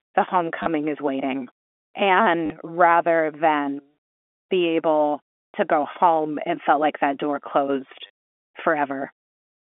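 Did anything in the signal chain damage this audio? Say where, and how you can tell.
Yes, and it's at the network stage: packet loss with the last packet repeated. You get short robotic stutters at 0.63–0.66 s just before "is waiting", 2.46–2.50 s before "rather than", 5.53 s between "be able" and "to go home it", and 8.07–8.10 s, covering about 30, 40, 20 and 30 ms. The receiver replayed the last packet out of step with the pitch, so the repeats buzz at about 100 Hz, which fits 10 ms packets.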